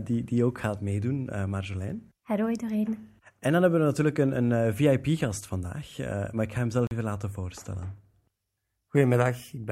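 A Bluetooth dropout cuts the speech from 6.87 to 6.91 s, right after "maar ik ga hem" and before "even laten voorstellen". For about 41 ms the output goes silent, then the speech picks up further along, as though it had kept playing through the gap. This is likely a wireless link failing to deliver audio packets in time, so the headphones muted until good data arrived. The gap's length fits two lost packets.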